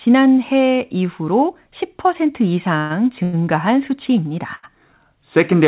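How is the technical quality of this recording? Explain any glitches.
The recording is narrowband telephone-quality speech. Nothing is heard above 4 kHz, which fits a G.711 mu-law call path at 64 kbps. It has one brief freeze and two shorter stalls, and all three are hiccups in timing rather than lost speech.

Call audio freeze, 2.78 to 2.92 s: for about 118 ms the sound hangs on a fading buzz or hiss instead of moving forward, then resumes exactly where it left off. The likely cause is packets held up in transit, so the jitter buffer emptied and the receiver kept extending the last sound until the delivery caught up. No speech is dropped; the 118 ms is inserted, pushing everything after it later.

Short stall from a late packet, 3.24 to 3.35 s and 4.55 to 4.65 s: the sound is briefly held too long, with a slight buzz or dip. The first stall lasts 90 ms and the second 80 ms. Each time, a single packet missed its playout slot. 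The buffer ran dry, and the receiver stretched the previous sound until that packet arrived, then carried on from the same point. Nothing is skipped, but each stall adds a small delay.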